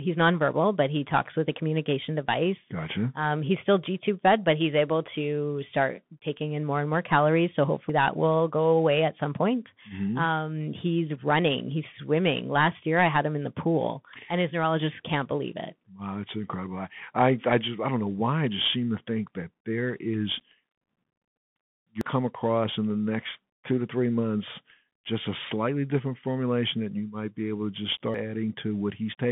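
The whole clip runs through a Bluetooth CVSD headset codec: speech squeezed into roughly 150 Hz to 3.5 kHz, nothing above 4 kHz, with a gritty hiss and scratchy s sounds from the one-bit slope coding. At 7.90 s, just before "that will", there's a jump where about a tenth of a second vanishes, likely a dropped buffer (overrun). The same skip hits at 22.01 s, before "come across in the", losing nearly a third of a second, and again at 28.14 s, right after "be able to just", losing about a tenth.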